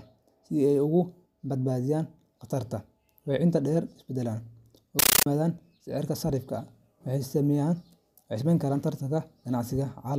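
From 4.99 to 5.26 s the speech gives way to a compressed stream played as audio: an undecoded AC-3 bitstream, consistent with 640 kbps, treated as samples. Each frame sounds as a 13.3 ms noise burst then silence, repeating at 31.25 Hz, producing loud chattering static.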